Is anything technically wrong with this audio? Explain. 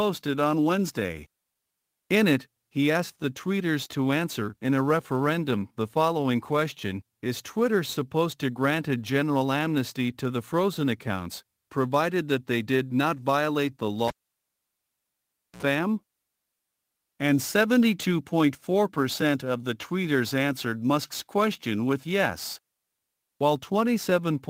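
Yes. Cable pulled and plugged in, 14.08 to 15.63 s: a live lead was withdrawn and reinserted. A pop opens about 1.5 s of near silence, then roughly 65 ms of 60 Hz mains buzz as only the plug tip makes contact, and a second pop as the sound returns.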